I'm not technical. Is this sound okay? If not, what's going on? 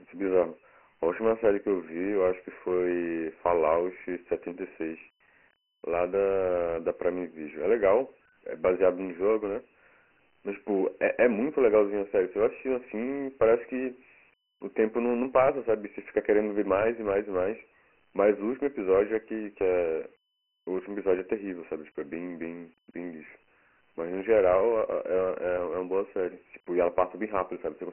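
No. Dialogic VOX ADPCM, throughout: this phone-system compression keeps only a rough sketch of the speech, cutting everything above 3 kHz and leaving a gritty hiss.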